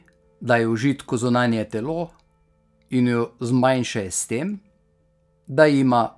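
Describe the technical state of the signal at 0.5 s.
At 0.5 s the signal is intact, with no dropout, clipping, glitch or other fault to be heard at that point.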